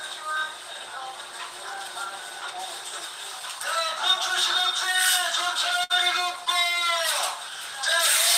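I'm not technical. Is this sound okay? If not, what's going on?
No. At about 5.84 to 5.93 s there is a burst of packet loss: a run of data never arrived. The receiver stretched the last sound for roughly 60 ms while fading it out, then resumed with about 60 ms of audio skipped.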